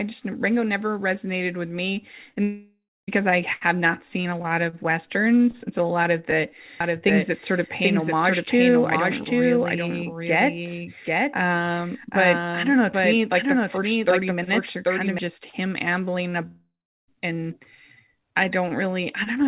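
At 2.29 s, 2.31 s and 2.34 s, just after "never resonated with me", short concealed packet loss occurs. Tiny gaps of 10 to 20 ms were filled in, leaving brief smears and wobbles.

From 2.43 to 3.09 s a long network dropout follows "resonated with me and". A fading buzz or hiss gives way to silence, and the sound resumes at "I have not seen" with part lost. This is likely a network stall.

From 6.8 to 15.2 s there is a doubled audio track. A dry second copy, about 5 dB quieter, trails by about 0.7 s and starts and stops abruptly. A second capture path is the likely cause.

From 16.47 to 17.09 s another long network dropout occurs, likely from the same cause. The concealment fades out, then roughly 0.4 s of silence falls before the sound returns, missing material. Throughout, the call codec's band limit means nothing is heard above 4 kHz.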